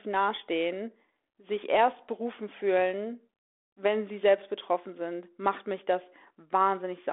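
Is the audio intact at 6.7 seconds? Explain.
Yes, at 6.7 seconds the audio is intact, with no fault at that moment, only the narrow telephone-band sound of the G.726 ADPCM link that carries the whole clip.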